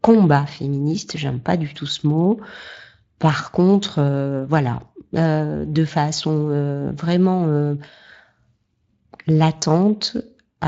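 No technical faults turn up anywhere in the speech. The Speex codec it passed through leaves only a light trace, consistent with a fairly high setting of around 24 kbps.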